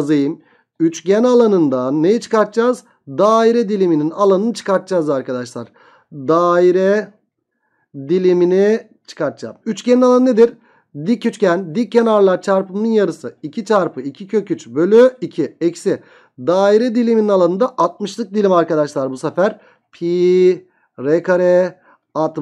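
Nothing in the audio stood out as a technical problem on listening.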